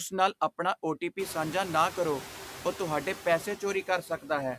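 Noise suppressor artifacts run through the whole recording. The suppressor lowers the background by only about 2 dB between phrases, leaving a residue that shows as speckled, uneven low-level energy on a spectrogram. The room noise, which rises about 22 dB near 1 s and then sits about 16 dB below the speech, can be heard beneath it. From 3.87 to 4.3 s, just after "ਕਰੋ ਉਹ ਤੁਹਾਡੇ ਪੈਸੇ", speech is cut by the noise suppressor. Roughly a tenth of a second of speech is pulled down as much as about 11 dB and sounds swallowed, with visible notches in the waveform envelope.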